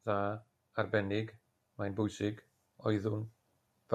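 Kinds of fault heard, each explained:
automatic gain rising: gain control lifts the input by about 4 dB from 0.05 to 3.33 s; speech and background swell together gradually, without per-syllable pumping.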